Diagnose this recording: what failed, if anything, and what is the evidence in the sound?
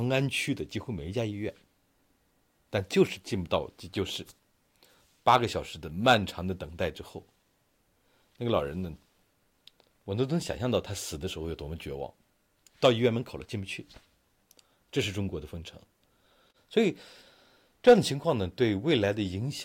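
Hard clipping appears in four short bursts, at 5.28–5.36 s, 6.08–6.14 s, 12.84–12.89 s and 17.88–17.93 s. The peaks are driven about 4 dB past the limit of a gain or converter stage and sliced flat, producing a brief crackle on only the loudest moments. Unlike soft saturation, which rounds peaks and adds warmth, these flat tops create abrupt high harmonics. Unlike codec artefacts, the damage follows level rather than spectral content.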